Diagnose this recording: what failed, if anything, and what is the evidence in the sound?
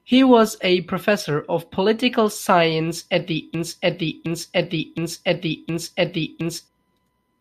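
A broken-record loop starts right after "at the" at 3.54 s: a 0.72 s fragment repeats exactly, back to back, four times until 6.68 s. The likely cause is a stalled playback or stream buffer resending its last fragment, so the intended audio there is lost.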